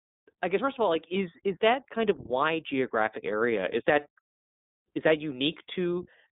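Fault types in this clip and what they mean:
iLBC codec: throughout, a narrowband VoIP coder rebuilds each 20 ms frame's excitation independently, giving the speech a plainly rough, synthetic edge. The band runs from about 200 Hz to 3.7 kHz, with nothing above 3.8 kHz, in its 15.2 kbps mode.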